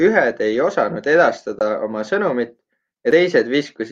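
From 1.59 to 1.61 s the speech drops into a brief gap. This is AAC frame loss with muting. The decoder got no data for that stretch and filled the missing spectrum with zeros. About 21.3 ms of sound is gone, which fits a single lost frame. The overlapping transform windows fade the signal down into the gap and back up afterwards. So the dropout has soft edges rather than a hard cut. It sounds like a tiny, smooth hole in the speech.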